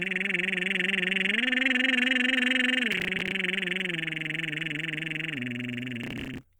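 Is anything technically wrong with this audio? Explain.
Yes. The music has processor overload crackle in two bursts, from 2.92 to 3.32 s and from 6.04 to 6.43 s. The processor could not finish its small audio buffers on time, each apparently around 10 ms. Dozens of deadlines were missed in a row. Each missed buffer was skipped, leaving a short hard-edged gap. Strung together, these gaps make a gritty, tearing crackle over the music. It stops when each burst ends.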